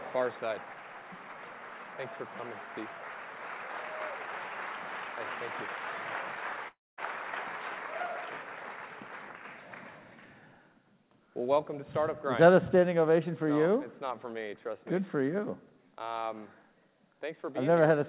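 A likely long network dropout cuts into this call audio from 6.68 to 7.00 s. Packets stop arriving, so the receiver stretches the last sound into a fading buzz, then drops to near silence for about 0.23 s. When the audio resumes, the lost 0.3 s never comes back. The call path's band limit, with nothing above 4 kHz, fits G.711 mu-law at 64 kbps.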